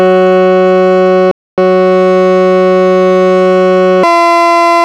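At 1.31 s the player exhausts its downloaded buffer and halts until more data arrives, a rebuffering stall. The music drops to silence until 1.58 s, then picks up exactly where it stopped. Nothing is skipped, but about 264 ms is inserted.

From 4.03 s to the end, a section plays at the wrong speed, likely because it was clocked against the wrong rate. Running 1.84 times too fast, the music abruptly turns hurried and shrill, with pitch jumping roughly ten semitones upward.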